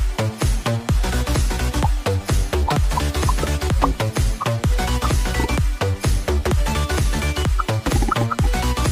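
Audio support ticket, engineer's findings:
Listened through the whole thing and nothing stands out, so there's no fault to log on this one.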